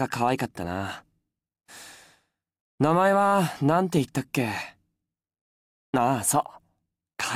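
The audio shows no technical faults anywhere in the recording.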